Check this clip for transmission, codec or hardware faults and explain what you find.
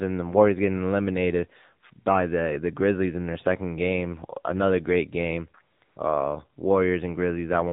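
Two faults are present: narrowband mobile coding throughout, and two brief comfort-noise fills near the end.

The AMR narrowband mobile codec runs across the whole speech clip. Nothing above 4 kHz survives, so the voice sounds muffled. The vocal-tract model gets few pulses per frame, leaving a plainly buzzy, synthetic tone that points to a low mode around 7.4 kbps.

AMR comfort noise appears from 5.76 to 5.82 s and again from 5.84 to 5.96 s, lasting 60 ms and 120 ms. The phone stopped sending speech frames, and the receiver filled each gap with smooth synthetic noise. The real background switches abruptly to this steady hiss and back.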